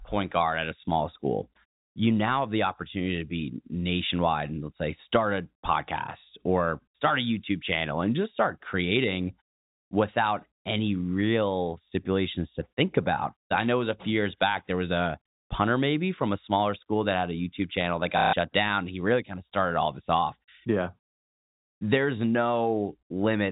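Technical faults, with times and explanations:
18.18–18.33 s: packet loss with last packet repeated. About 150 ms went missing and the receiver looped the last good packet to fill it, giving a brief robotic stutter and a buzz near 33 Hz, which fits 30 ms packets over the G.711 telephone band.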